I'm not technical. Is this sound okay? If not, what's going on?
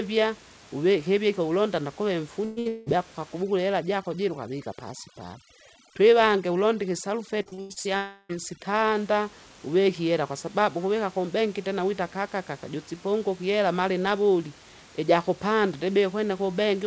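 No. Right after "hivike hulonda nda kuve", at 2.45 s and again at 2.59 s, there are two back-to-back bursts of packet loss. Each time, chunks of audio arrived too late or not at all, so the receiver kept stretching the last sound into a buzz or hiss that fades, and about 0.18 s of real sound is simply gone.

From 2.68 to 2.89 s, and again from 7.97 to 8.32 s, the stretching continues even longer and then fades, leaving a hole where roughly 0.2 s and then 0.33 s of sound never arrived. This is likely a long network dropout, where the connection stalled outright.

From 3.43 to 8.95 s there is overdone noise removal. A noise filter was set too aggressively. It strips out the room hiss so hard that the background drops away and breaks up into twinkling specks, and it takes parts of the speech with it.

Between 7.42 and 7.88 s there is repeated packet loss, which produces a robotic sound. Six small gaps, the longest about 90 ms, come one after another. 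More than half of that half-second is patched-over filler, so the speech sounds choppy.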